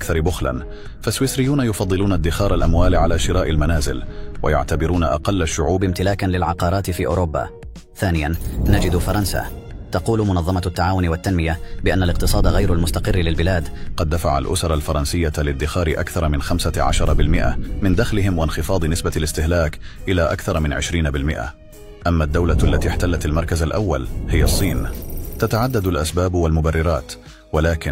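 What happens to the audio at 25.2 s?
Nothing goes wrong at 25.2 s; the audio plays through that moment intact, with no audible fault.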